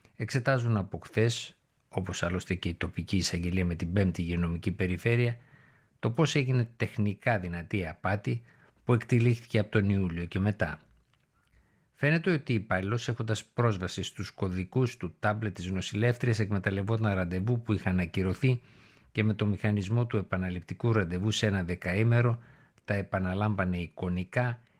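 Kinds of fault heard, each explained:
Nothing stood out on listening to this speech recording.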